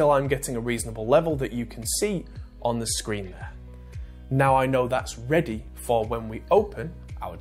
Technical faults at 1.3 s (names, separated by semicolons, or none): none